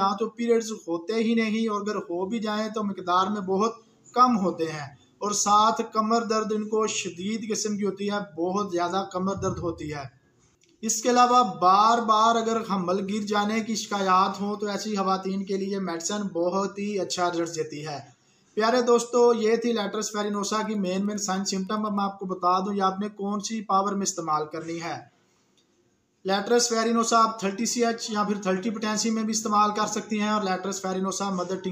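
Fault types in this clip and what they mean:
Wi-Fi interference: the audio circuit picks up and rectifies a nearby Wi-Fi radio's beacon every 102.4 ms, heard as faint, steady ticking well beneath the sound.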